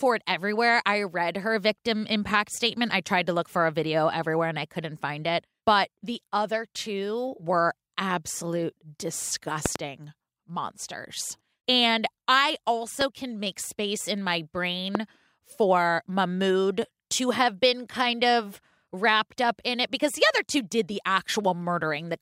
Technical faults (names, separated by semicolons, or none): loud pop